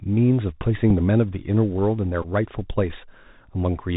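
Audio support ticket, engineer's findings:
Bluetooth CVSD headset codec, whole clip: nothing above 4 kHz, scratchy s sounds, granular hiss under speech, loud highs distorting. Points to a one-bit adaptive-step CVSD link that can't keep up.

Bluetooth headset packet repeated: small tick at 0.90 s, then a brief buzz near 267 Hz at 2.22–2.26 s, fitting about four lost packets with the last packet's data decoded again.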